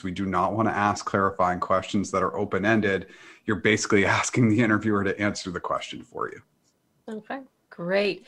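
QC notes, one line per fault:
No faults heard in this speech recording.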